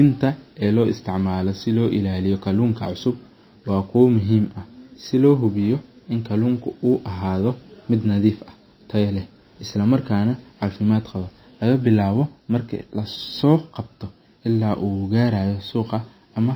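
MP3 compression runs throughout. The speech has nothing above 5.8 kHz and a plainly audible watery, swirling smear, likely from an encoder starved at a low bitrate near 24 kbps. Sample clock jitter also runs throughout. The converter's clock wobbles by a few microseconds, adding a roughness roughly 45 dB below the speech that grows on loud, bright passages.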